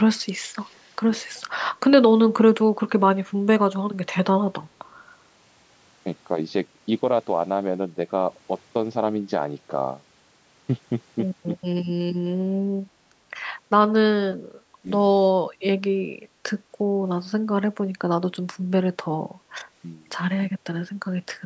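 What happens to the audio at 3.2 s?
Nothing goes wrong at 3.2 s: the speech there runs on intact, with only the normal bass roll-off and the 8 kHz upper limit of call microphone processing.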